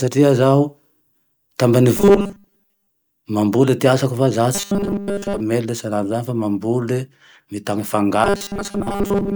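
Speech with robotic sound from repeated short buffers at 1.97–2.90 s, between "fa za" and "mail salan'izany" at 4.55–5.40 s, and after "mambole mitany" from 8.24 s to the end. A rigid 200 Hz buzz is imposed on the voice, likely from looping 5 ms buffers while most of the audio is skipped. Unlike codec warble, this pitch stays fixed whatever the speaker does.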